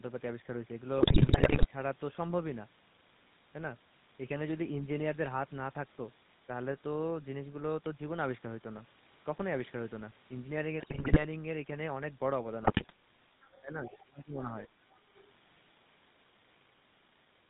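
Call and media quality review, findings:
GSM full-rate codec, whole clip: steady buzzy, gravelly roughness on speech, nothing above 4 kHz; regular-pulse excitation with decimated residual, consistent with 13 kbps full rate. Constant throughout, unlike bit errors, which come in bursts.

GSM bit errors, 0.98–1.67 s, 10.8–11.25 s, 12.62–12.92 s: squawks, pops, gargling; corrupted filter, pitch and gain parameters reaching the decoder at roughly 5% error rate. Sudden spectral and level blow-ups frame by frame, not the constant codec buzz.

Other side's voice leaking through, 13.44–13.61 s and 15.17–15.21 s faint, 13.83–14.04 s much louder: a second voice under the talker. Likely residual loudspeaker echo the canceller missed. Added sound, whereas double-talk suppression removes the talker's own.

Speech suppressed in double talk, 13.61–14.71 s: talker dips by around 20 dB, about 0.7 s in total, while the far side's voice is present. 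Likely the echo canceller attenuating during overlap. Loss of the near voice, not an extra one.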